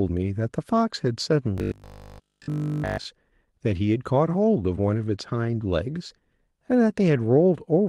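A speech recording carried over an Opus call path whose spectrum tops out near 12 kHz. From 1.58 s to 3.06 s it turns into robotic sound from repeated short buffers: a rigid, metallic 50 Hz buzz that loosely tracks the speech. The likely cause is audio arriving too late, so essentially that whole stretch is made of the last 20 ms buffer replayed over and over while the real audio is skipped. The waveform shows identical 20 ms cycles, and the spectrogram shows evenly spaced 50 Hz harmonic stripes.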